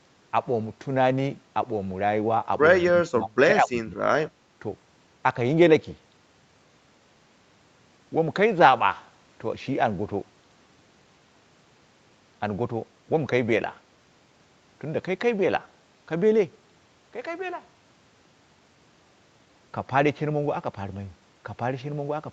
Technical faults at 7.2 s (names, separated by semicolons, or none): none